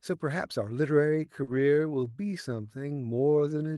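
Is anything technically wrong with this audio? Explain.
Yes, there are three problems, all from 1.08 s onward.

From 1.08 s to the end, the speech suddenly slows to about 0.71 times its earlier pace while the pitch stays put. The likely cause is a time-stretched section: software lengthened this stretch to fill a set duration by repeating short slices of the waveform rather than resampling. That is why the pitch does not drop as it would with plain slowed playback, and the abrupt change of pace distinguishes it from a speaker simply talking more slowly.

At 1.43 to 1.49 s there is short concealed packet loss. About 40 ms of audio never arrived, and the decoder filled the hole by carrying the preceding sound forward, then blended back into real audio. It is heard as a brief smear or wobble. Unlike a dropout, there is no silence, and unlike the stretch, it is a single momentary blip rather than a sustained change of pace.

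From 1.47 to 1.61 s comes a lost packet rebuilt from error correction. About 80 ms, which fits several lost 20 ms packets, was replaced by the low-bitrate backup copies that Opus sends inside the following packets. Nothing goes missing, but the passage turns rougher and noisier for that stretch. That coarseness, with no smearing or invented continuation, is what sets it apart from the concealed gap just before it.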